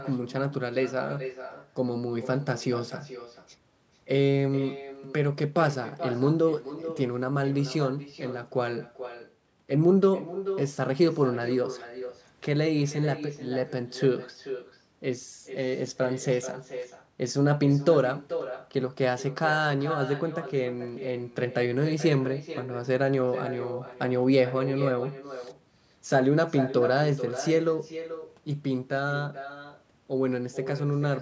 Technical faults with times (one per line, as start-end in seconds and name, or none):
0.00-31.22 echo with no canceller